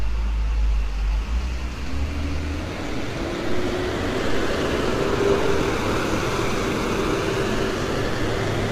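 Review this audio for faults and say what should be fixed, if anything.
The whole clip has a rough, grainy texture with a hazy, noisy fill and nothing above about 16.5 kHz, which is likely low-delay AAC compression (AAC-ELD). Its short frames handle tonal detail poorly, and damage this heavy fits a bitrate around 24 kbps. To prevent it, capture or export at a higher bitrate, or use a standard-delay codec when low latency isn't needed.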